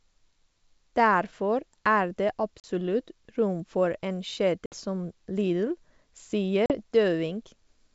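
Speech, carried over a wideband G.722 call, with packet loss on an ADPCM call: hard-edged silent gaps at 2.60–2.65 s, 4.66–4.74 s and 6.66–6.73 s, each a few packets long. After each gap the decoder's predictor and step size are out of step, so the speech resumes slightly distorted before settling.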